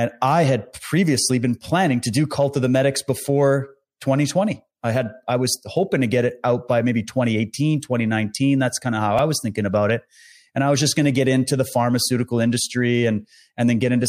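At 9.19 s a brief buzzy click sounds in the speech: a repeated buffer, where one tiny slice, fitting a 64-sample buffer, replayed several times while new audio arrived late.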